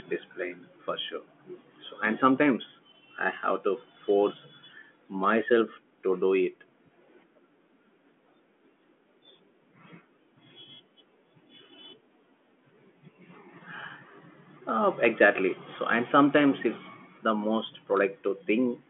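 No technical faults can be heard in this speech recording. It carries the narrow telephone band of a G.726 ADPCM path at 40 kbit/s, with the sound confined to roughly 200 Hz to 3.4 kHz, nothing above about 3.8 kHz, and at most a faint trace of coding hiss.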